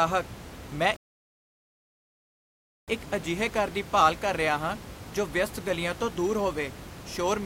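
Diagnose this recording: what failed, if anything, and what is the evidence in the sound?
Playback stall at the playback stage: speech cuts out from 0.96 to 2.88 s and resumes on "ਇੱਕ ਅਜਿਹੇ ਘਰ ਦੀ". The waveform goes flat and the spectrogram blank, likely from a starved output buffer.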